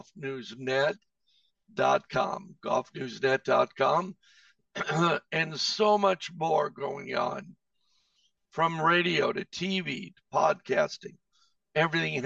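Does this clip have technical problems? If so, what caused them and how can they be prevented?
Yes. Channel delay with comb filtering runs through the whole clip. One channel lags the other by around 5 ms before a mono sum. Shared sound cancels near 100 Hz and at evenly spaced steps above. It sounds hollow. Align both channels before summing to mono.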